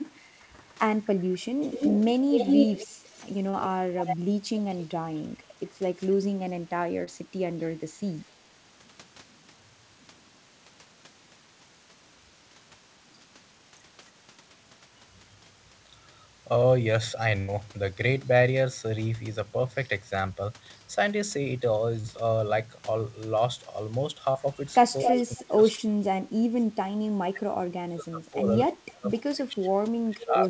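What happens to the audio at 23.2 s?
Nothing goes wrong at 23.2 s: the speech continues intact through the call path, whose G.722 coding keeps the sound band-limited to below 8 kHz there.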